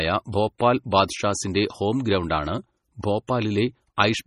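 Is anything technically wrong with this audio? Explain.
Yes. Two problems are audible.

Throughout the clip the speech has a watery, swirling quality, with no content above 14.6 kHz and brittle, chirpy sibilants. This is heavy damage, likely from MP3 compression at a low bitrate that fits roughly 32 kbps. With so few bits available, the encoder cuts the treble at a fixed frequency and drops weak spectral lines. Those lines flicker on and off between frames, which causes the swirl, and consonant attacks smear.

Pre-echo occurs at 0.32 s, from 0.58 to 0.60 s, and at 3.27 s. Each time, a short hiss leads into a sharp onset, by about 14 ms, 21 ms and 15 ms respectively. The codec spreads quantisation noise across a whole transform block. When an attack lands late in a block, noise scaled for the loud part fills the quiet gap before it. As a result, these onsets sound softened rather than crisp.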